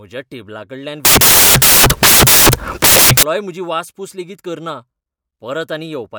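From 1.05 s to 3.23 s, the speech gives way to loud, harsh broadband noise. These are samples built from the wrong bytes. The reader assembles each sample incorrectly. It may be off by one byte, or have the byte order swapped. The rapidly changing low-order bits end up as the most significant part of each value. Their randomness becomes loud noise.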